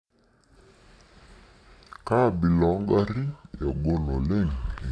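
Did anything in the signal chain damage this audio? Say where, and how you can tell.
Yes. The playback stage has a wrong sample rate, throughout: the speech runs at about 0.69 times normal speed and sits about 6.5 semitones low, slow and deep together. That tracks the ratio of 32 kHz material being clocked out at 22 kHz, with no conversion.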